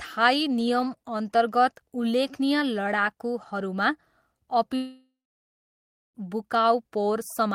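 At about 4.75 s the speech cuts out in what sounds like a long network dropout, lasting until about 6.17 s. Roughly 1.4 s of audio never made it through, most likely lost in transit, so the receiver papers over the gap by stretching the last sound into a fading buzzy tail. That concealment gives up fast, leaving about a second of plain silence, and then the speech picks up again with the missing stretch simply gone.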